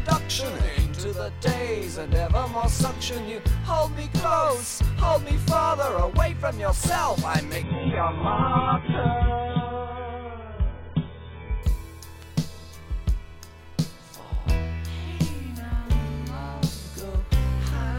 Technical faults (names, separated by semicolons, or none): adaptive stream at a lower bitrate